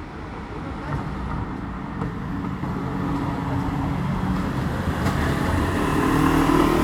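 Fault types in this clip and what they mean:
There are no fault types in this clip of sounds.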